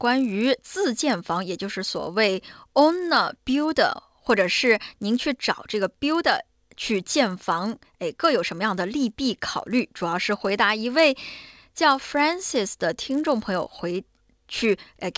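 Resampler restarted on every block, throughout: each 10 ms block was converted from 44.1 kHz to 16 kHz separately, so edge errors produce a 100 Hz buzz whenever sound is present.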